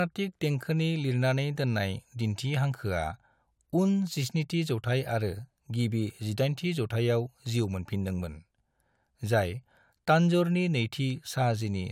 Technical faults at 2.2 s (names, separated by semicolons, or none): none